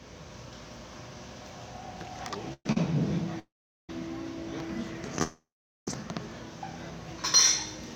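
A recording of everyday sounds is broken up three times by call audio freezes. At 2.53 to 2.66 s the last sound hangs on as a fading buzz or hiss for about 0.12 s, ending in a brief silence. At 3.39 to 3.90 s it holds for about 0.5 s and mostly goes quiet. At 5.22 to 5.88 s it holds for about 0.65 s, again mostly quiet. The likely cause is packets held up in transit, leaving the jitter buffer empty while the receiver filled the wait. Each time the audio picks up where it stopped, so nothing is lost but the gaps push everything later. There is also a short stall from a late packet at 2.72 to 2.77 s. The sound is held a fraction too long, about 41 ms, with a slight buzz or dip. One packet missed its playout time, so the receiver stretched the previous sound until it turned up and then carried on without dropping anything.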